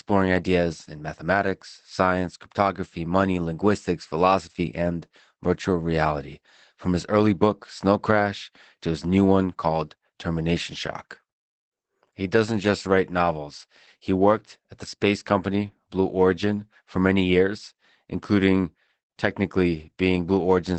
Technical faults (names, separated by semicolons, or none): Opus voice compression